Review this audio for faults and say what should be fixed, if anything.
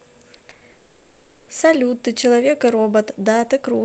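Repeated packet loss (robotic sound) runs from 0.37 to 0.63 s. Packets went missing in four separate gaps, the longest 60 ms, and the receiver patched each by extending the preceding sound. About half that stretch is filled-in audio, so it turns choppy. Prevent it with forward error correction and a slightly deeper jitter buffer.

From 0.71 to 1.49 s, the most likely cause is a long network dropout: no new audio arrived for about 0.76 s. Concealment carries the last sound forward as a smeared, fading buzz or hiss with no real content. Genuine sound returns only at 1.49 s, and the lost portion is gone. Prevent it by fixing the link's stability, with redundant transmission on unreliable paths.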